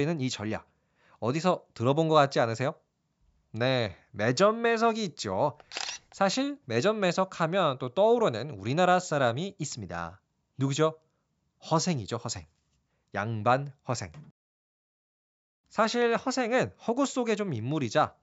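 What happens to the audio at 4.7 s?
Nothing goes wrong at 4.7 s; the speech there is intact, carried through the call's microphone processing with its lowest bass trimmed, and no dropout, click or distortion breaks it.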